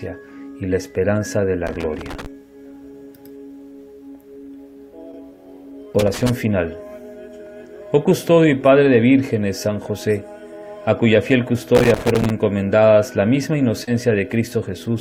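A worn or dirty contact in the signal chain was making and breaking as it moved, chopping the audio. This loose connector crackle comes as irregular bursts of scratchy crackle from 1.67 to 2.26 s, 5.99 to 6.29 s and 11.75 to 12.30 s. At 13.84 to 13.88 s, about 30 ms of audio never reached the decoder in time, and the receiver filled the gap with 31 ms of sound extended from what came before. This short concealed packet loss is heard as a brief smear or wobble.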